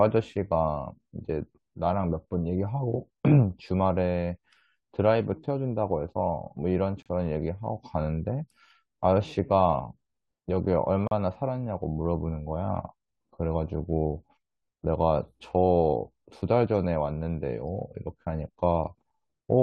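At 7.02 to 7.06 s, 11.07 to 11.11 s and 19.10 s, the speech drops into hard-edged silence. These are gaps between stream segments, about 32, 38 and 6 ms long. Timestamps of adjoining 4 s segments don't meet, so silence fills the holes. Nothing is lost.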